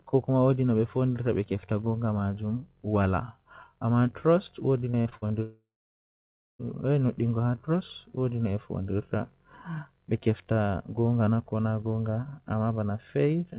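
From 4.9 to 5.32 s the speech breaks up into repeated packet loss with a robotic sound. Five short holes fall within that stretch, the longest about 46 ms, and each is patched by stretching the preceding sound, so roughly 38% of the span, around 160 ms, is concealment rather than real audio. The result is choppy and robotic. On a spectrogram the harmonics turn into flat, smeared bands in short blocks, and the waveform shows repeated, oddly regular cycles where the natural variation of speech should be.

At 5.42 s the audio cuts out entirely until 6.61 s, which is most likely a long network dropout. For the first fraction of a second a fading buzz continues the last sound, and then about 0.95 s of near-silence follows before the speech returns, with the content from that gap missing. A spectrogram shows a brief smeared tail and then an empty band. The waveform collapses to a flat line, and the speech resumes at 6.61 s. 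Throughout, nothing appears above 4 kHz, which fits narrowband G.711 coding on the call path.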